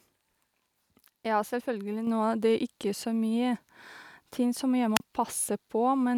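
A microphone volume step-up occurs at 2.07 s: the calling software judged the input too quiet and raised the device's capture gain in a single jump of about 6 dB. Speech and background noise both become abruptly louder at that instant and stay there.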